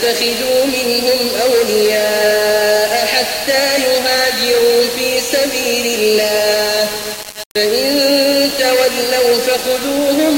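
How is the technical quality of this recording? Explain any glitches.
Poor: the whole recording carries heavy grainy distortion from start to finish. The likely cause is low bit depth without dither, with the sound rounded to only about 4 bits. Rounding to so few steps makes the error follow the waveform, leaving distortion only around 15 dB below the signal. Quiet passages turn gritty. This grain rises, falls and changes character with the sound itself, and vanishes in silence.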